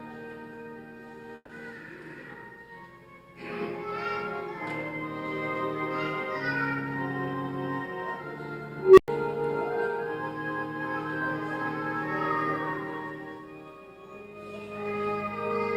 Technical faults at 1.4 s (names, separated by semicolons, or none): burst of packet loss